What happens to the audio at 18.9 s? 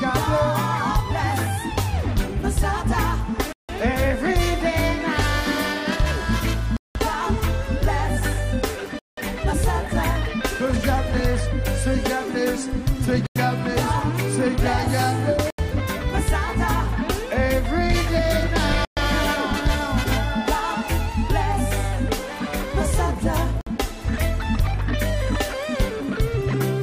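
From 18.85 to 18.97 s the sound cuts to silence for about 120 ms. This is likely a Bluetooth stall, where delayed packets drained the buffer, and it picks up where it stopped or slightly later.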